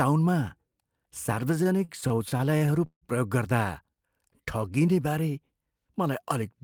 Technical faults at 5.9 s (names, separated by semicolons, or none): none